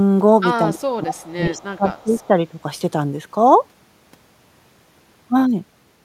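From 0.64 to 2.44 s the speech repeatedly dips, by up to about 25 dB, for around one and a half seconds in total: speech suppressed in double talk, likely from an echo canceller muting both overlapping talkers. Between 1.98 and 2.27 s a faint copy of the speech trails it by 206 ms, far below the speech itself: an echo leak, likely where loudspeaker pickup escaped cancellation.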